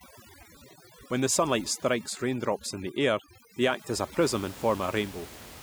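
From 0.0 to 4.22 s, overdone noise removal gates frequency bands near the noise estimate, leaving twinkling specks in near-silence where the room noise was and cutting away quiet parts of the speech.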